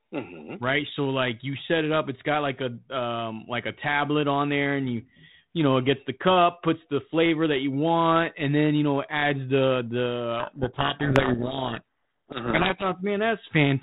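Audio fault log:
10.4–12.84 s, codec payload misread: just after "you know adds the", the speech is buried in harsh, grinding distortion for about 2.4 s. The G.726 code words are unpacked in the wrong bit order, so the decoder rebuilds each sample from misplaced difference values.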